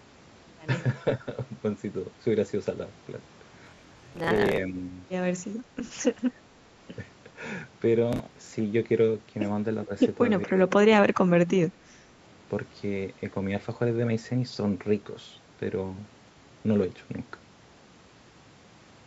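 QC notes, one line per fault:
3.65–4.57 s and 8.13–8.52 s, processor overload crackle: gritty tearing rides on the speech as many roughly 10 ms buffers miss their deadlines and replay stale audio with hard edges, dozens in the first burst, about ten in the second.
4.69–4.86 s, 6.31–6.39 s and 9.86–9.91 s, speech suppressed in double talk: brief shallow dips of about 5 dB, likely an echo canceller ducking the talker while the far side also spoke.
10.46–10.98 s and 11.28–11.91 s, speech suppressed in double talk: the voice drops by about 20 dB, likely the same canceller clamping harder during overlapping talk.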